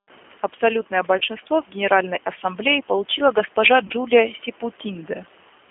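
Throughout, the speech passes through a G.729 codec, whose low-rate, consistent with 8 kbit/s, pulse-based rebuilding leaves a 250 Hz to 3.4 kHz line band with plainly audible rough, synthetic texture.

At 1.18 to 1.22 s, and again at 3.87 to 3.93 s just after "получила госпожа", VoIP packet loss concealed by the speech codec occurs. Each gap fits about 30 ms of lost audio, and the decoder's extrapolation turns it into a brief fading smear.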